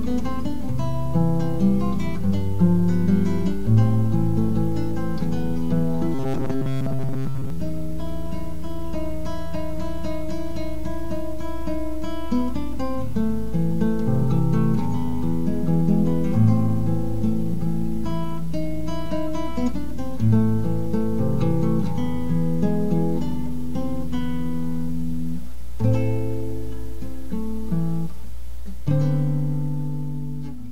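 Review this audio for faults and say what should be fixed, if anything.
From 6.14 to 7.50 s, robotic sound from repeated short buffers: a chunk of about 7.5 ms keeps looping, likely because audio arrived late, so most real signal is skipped and a 133 Hz buzz results. Spectrograms show rigid 133 Hz harmonic stripes, and the waveform repeats one shape. Deeper jitter buffering prevents it.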